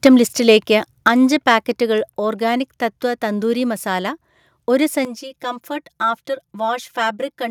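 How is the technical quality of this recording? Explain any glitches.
The recording has three kinds of fault: brief peak clipping near the start, two sudden level drops, and a hollow, phasey tone over the final stretch.

Microphone overload occurs at 0.05–0.08 s, just before "ലിസ്റ്റിലേക്ക് അഞ്ച്", and again at 1.49–1.55 s, right after those words. The input likely ran past full scale, by about 5 dB and then about 1 dB, so the waveform tops were flattened. That gives a harsh crackle on the peaks only, unlike comb filtering, which colours the whole tone.

Microphone volume stepped down at 0.07 s, by about 3 dB, and again at 1.08 s, by about 5 dB. Software likely reacted to the hot input by cutting gain in one jump. Voice and background fall together and stay lower, a clean level shift with no added distortion.

Channel delay (comb filtering) runs from 5.05 s to the end. One channel lags roughly 5 ms, and summing to mono cancels evenly spaced frequencies, starting near 100 Hz. 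The sound turns hollow but stays undistorted and level, which separates it from both faults above.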